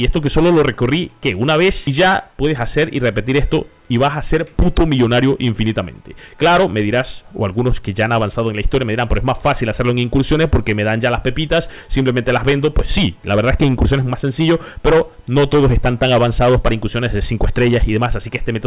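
No technical faults can be heard anywhere in the recording. Nothing in the audio calls for comment at any point.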